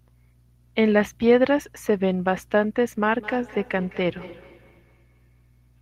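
From 3.14 to 5.75 s, speech repeats thinly and faintly roughly every 0.2 s: feedback echo between two devices, one replaying the other's microphone.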